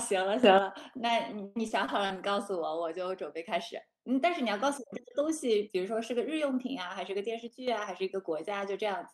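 A sudden gain jump at 0.44 s lifts the speech and the background noise together by about 10 dB, and the higher level holds until about 0.58 s. The step happens between one sample and the next, with no ramp, so the change is abrupt rather than a fade. The likely cause is a gain setting or bit shift applied instantly.

Repeated packet loss with a robotic sound runs from 0.97 s to 2.32 s. Seven holes appear in quick succession, the longest lasting 100 ms, with about 220 ms missing in total. Each hole is patched by stretching the last stretch of sound forward, around a fifth of a second rebuilt overall, covering about 17% of the span. The speech turns choppy, with fragments gone.

A second sudden gain jump at 7.48 s drops the speech and the noise floor together by about 7 dB, and the lower level lasts until about 7.68 s. As before, the level falls in a single step instead of easing down, so the loss of loudness is sharp and immediate.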